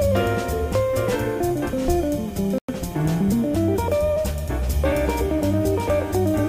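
From 2.58 to 2.69 s the sound cuts to silence for about 100 ms, then resumes further on, likely a Bluetooth dropout; waveform and spectrogram show a clean, empty gap.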